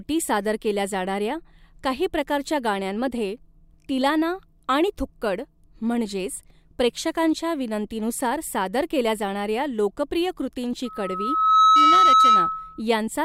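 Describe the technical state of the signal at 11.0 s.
Loudspeaker feedback squeal, 10.85 to 12.82 s: the microphone re-amplifies its own loudspeaker, so a 1.3 kHz tone swells within a second to about 10 dB above the speech.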